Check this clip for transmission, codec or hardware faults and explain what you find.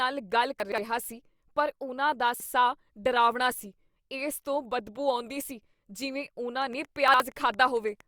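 Two kinds of fault are present: chunks out of order at three points, and a train of clicks near the end.

Chunks out of order at 0.6–0.78 s, 2.34–2.46 s and 7.08–7.2 s: a 60 ms chunk plays two, one and one chunk late respectively. The misordered sequence jumbles the speech briefly.

Train of clicks from 6.62 to 8.01 s: about 15 regular clicks at 8.66 per second, peaking roughly level with the speech. They are heard as steady ticking, likely caused by interference.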